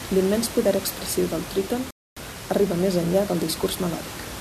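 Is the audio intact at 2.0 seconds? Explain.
No. At 2.0 s the speech drops to silence from 1.91 to 2.17 s, after "poder expressiu del tríton", then picks up at "arriba més enllà" with nothing missing. This is a rebuffering stall: the player ran dry of downloaded audio and waited, adding about 0.26 s.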